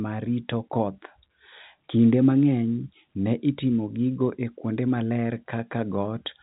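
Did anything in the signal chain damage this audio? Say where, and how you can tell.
No, nothing in the chain damaged this speech; it carries the narrow band of G.711 telephone coding, with nothing above 3.8 kHz, and the faint level-following hiss of its logarithmic 8-bit scale sits well beneath the signal, as that telephone format is meant to behave.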